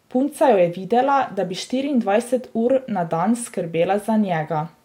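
Nothing in the recording stood out as a technical fault on listening.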